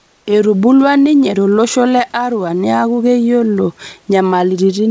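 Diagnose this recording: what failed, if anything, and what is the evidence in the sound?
Comfort noise in place of the background, 0.00 to 0.26 s, at the call-processing stage: the opening background is a steady, featureless hiss about 3 dB quieter than the room noise that follows. Likely discontinuous transmission paused sending, so the receiver synthesised shaped filler noise.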